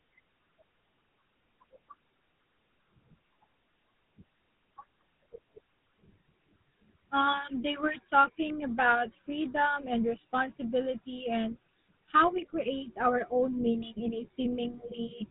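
From start to finish the speech carries GSM full-rate codec damage, plainly audible. The codec drives a model of the vocal tract with a sparse pulse excitation at a rate fitting 13 kbps, giving a buzzy, gravelly roughness. A spectrogram shows everything above 4 kHz cut away and smeared harmonics.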